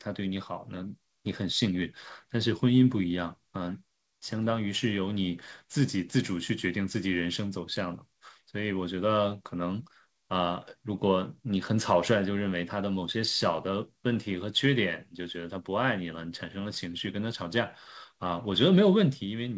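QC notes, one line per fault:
Nothing to flag here: the speech comes across the G.722 call link just as that link should, topping out around 8 kHz, and there's nothing worth a line.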